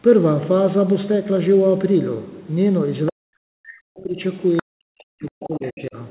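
At 3.06 s a brief second voice appears about 20 dB under the talker, likely the other side's voice leaking through: far-end loudspeaker sound that the echo canceller left in the microphone signal. From 3.11 to 4.2 s the talker drops by as much as about 40 dB, thinning and breaking up for roughly a second, likely speech suppressed in double talk. With both sides active, the canceller could not separate talker from echo and attenuated both. At 4.6 s the leak returns, louder at about 10 dB below the talker. The suppression follows from 4.61 to 5.96 s with the same deep dips. Within that stretch, from 5.26 to 5.87 s, a longer run of far-end voice sits about 20 dB down.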